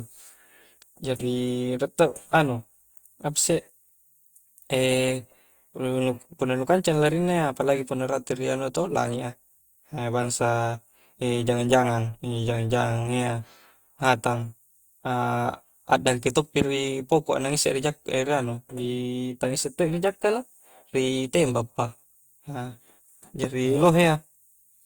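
At 16.62 s and 23.44 s a single loud pop lands on the speech. Each lasts about 20 ms, the first roughly 20 dB above the signal and the second a little softer. Likely a voltage spike added on top; unlike a dropout, the speech continues underneath.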